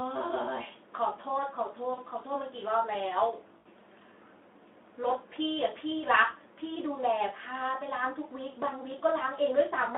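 Speech over a Speex-coded phone-band line, with VoIP packet loss concealed by the speech codec at 1.93–2.01 s and 3.57–3.68 s: the decoder stretches the last sound into a buzzy tone or coloured noise that fades, across roughly 40 ms and 80 ms gaps.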